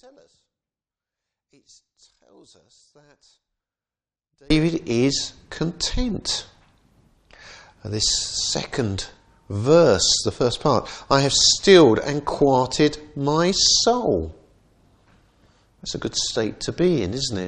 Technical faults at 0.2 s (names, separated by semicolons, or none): one channel inverted